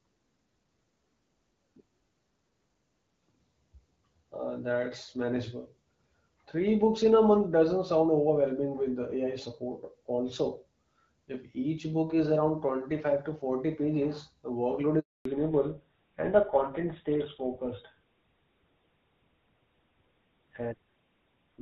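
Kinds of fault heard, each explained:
Handover gap: after "pages the workload" the speech cuts out at 14.99 s, fading within a few tens of milliseconds, and stays silent for 260 ms until 15.25 s. The call was being passed between networks, and no speech frames arrived while the link changed, so that stretch is simply missing.
Fallback to narrowband: from 15.25 s to the end the speech sounds duller and rougher, with nothing above 4 kHz. After the handover the call left wideband AMR-WB coding, which fits around 12.65 kbit/s, for an older narrowband codec, which fits GSM full rate at 13 kbit/s, so the upper band is cut away.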